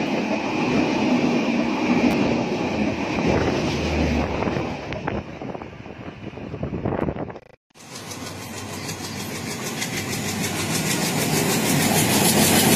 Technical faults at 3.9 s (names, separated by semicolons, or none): none